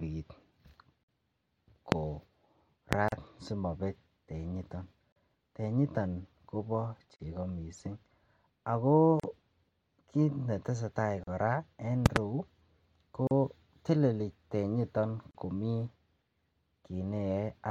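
At 1.04 s the speech drops out for about 50 ms, a gap at a join of encoded pieces where separately encoded segments were butted together with their encoder delay and end padding left in. At 1.92 s and 2.93 s single loud pops, around 25 dB above the speech, sit on top of the sound, likely voltage transients from a plug, switch or static. Further gaps of about 38 ms, each with smeared edges, follow every 2 s at 3.08, 5.12, 7.16, 9.20 and 11.24 s, then a double loud pop spans 12.06 to 12.19 s, and the final gaps fall at 13.27 and 15.31 s.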